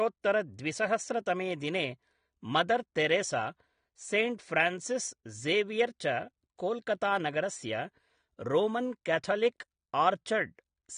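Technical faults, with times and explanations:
Throughout: AAC compression. Nothing is present above about 9.7 kHz, so the speech sounds dull and lacks air, and the coding damage is plainly audible across the whole clip. The likely cause is AAC-LC encoding at a low bitrate, which fits about 32 kbps. With so few bits per frame, the encoder lowers its cut-off to spend what it has on the lower spectrum and quantises the remaining frequency lines coarsely.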